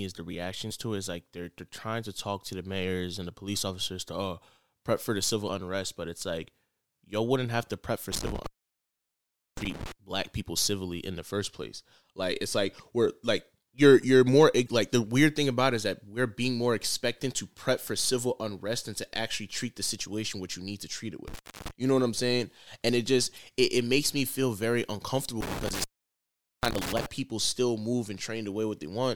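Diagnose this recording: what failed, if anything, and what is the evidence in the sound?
Brief glitches of about 44 ms at 0.67, 5.45, 14.64 and 23.34 s point to damaged data in a compressed stream. At the codec stage, the decoder misreads corrupted frames and loses sync before relocking.

Dropouts with crackle at their edges and faint hiss inside, at 8.12–9.92 s (open 1.11 s), 21.28–21.71 s (0.31 s) and 25.41–27.06 s (0.79 s), reveal an intermittent contact, a loose analogue cable or plug.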